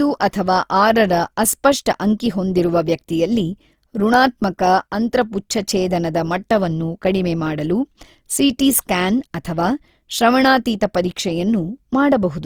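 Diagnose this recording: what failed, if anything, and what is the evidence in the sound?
Opus compression runs through the whole speech recording. The damage sits at the codec stage. The audio keeps its full bandwidth, with content reaching about 20.4 kHz. Yet it is plainly degraded: tonal parts of the speech sound grainy, rough and noisy rather than swirly. That points to the likely cause, Opus in its CELT music mode at a low rate around 24 kbps, holding band energies but filling starved bands with folded or noise-like substitutes.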